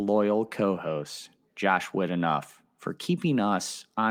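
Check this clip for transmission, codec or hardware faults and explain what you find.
Nothing turns up here: I listened through the whole recording and heard no sign of any transmission, codec or hardware problem.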